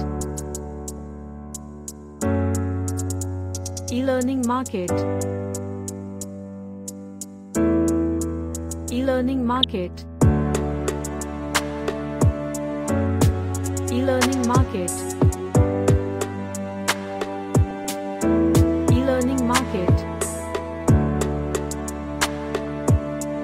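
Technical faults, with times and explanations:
0.98–1.05 s, 9.54–9.64 s, 15.91–15.96 s, 17.71–17.91 s and 22.60–22.66 s: DAB burbling. Weak reception lets a small fraction of bit errors slip past error correction into the MP2 data. Corrupted samples and scale factors briefly throw individual sub-bands off level, so you hear short blips of noise over the sound. The longest burst, at 17.71 s, runs about 0.2 s.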